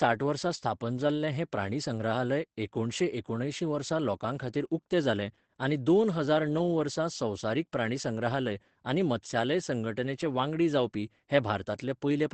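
Speech throughout this clip carries Opus voice compression. The top end stops near 8 kHz, the coarsely coded excitation makes voicing sound hoarse and faintly robotic, and the damage is plainly audible for the whole clip, which fits the SILK linear-prediction coder running at a low bitrate around 12 kbps. Unlike a simple low-pass filter, the band limit comes with rough, buzzy texture, not just dullness. Unlike MP3-style damage, there is no swirling or metallic pre-echo.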